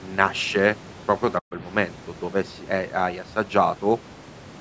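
Speech in which the voice abruptly sinks from 1.40 to 1.55 s, falling by roughly 40 dB so it almost vanishes before recovering. This is speech suppressed in double talk, likely from an echo canceller that mistook the talker for loudspeaker echo while the far side spoke, and turned both down.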